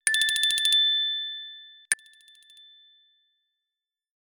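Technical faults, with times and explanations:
1.94 s to the end: audio dropout to a faint residue. The signal cuts out abruptly and never returns. Only a faint leak remains, roughly 30 dB below the normal level. The likely cause is a lost source with the downstream path still live, passing only residual leakage.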